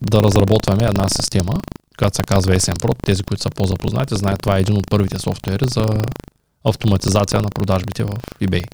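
Speech with buffer tearing throughout: a 25 Hz robotic rattle while sound plays, as a small slice of each 40 ms period repeats audio about 150 ms old, leaving regular waveform jumps and vertical spectrogram stripes.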